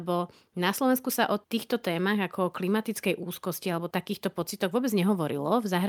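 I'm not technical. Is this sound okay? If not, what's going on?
Yes, nothing wrong can be heard in this speech.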